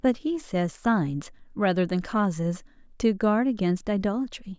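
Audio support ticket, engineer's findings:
Nothing stood out on listening to the speech; no issue found to attribute to any component.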